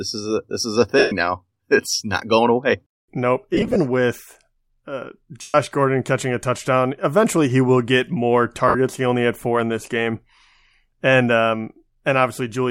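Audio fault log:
0.99–1.12 s, 3.54–3.76 s, 5.41–5.55 s, 8.68–8.75 s: lost LE Audio frames. Each dropout is concealed by reusing the last spectrum with randomised signs, so harmonics become a noisy smear. On a spectrogram, the harmonic lines blur into diffuse bands, and the longer gaps fade toward silence. At 3.54 s the losses come in short scattered runs, the longest around 20 ms. The roughly 128 ms gaps fit 7.5 ms frames.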